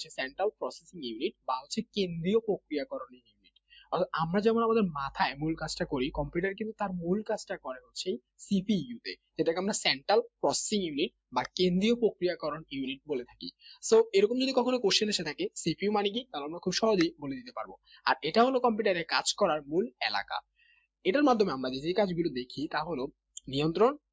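A speech-tuned noise suppressor applied to music or sounds runs through the whole clip, and it treats anything steady (held tones, ambience, reverb tails) as noise to pull down. The level keeps wobbling by a few dB, so held material pumps and thins while attacks mostly get through. It gets much worse in five spots where the sound is cut by the noise suppressor: 0.30–0.62 s, 0.84–1.02 s, 1.32–1.97 s, 3.07–3.92 s and 7.80–7.95 s. In each of those, sustained or decaying parts sink hard, about 16 to 21 dB at the deepest, and tails get chopped short. The affected time in each dip runs from roughly a sixth to half a second. From 9.55 s to the end there's also pre-emphasis left on. The treble boost that belongs on the transmit side never got its matching de-emphasis, and the curve fits the FM 75 µs standard, which puts the top end up about 14 dB at 10 kHz relative to 1 kHz. So that stretch sounds thin, glassy and hissy-bright. 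It's all going through a call microphone chain that tops out around 8 kHz.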